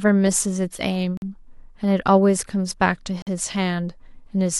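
Gaps between chunks break up this speech recording twice, at 1.17 to 1.22 s and again at 3.22 to 3.27 s, each a hole of about 48 ms. The audio has been delivered in 2.0 s chunks, and a short stretch of silence has been inserted at each join. Nothing is lost from the recording itself, but the flow stops dead at those two points.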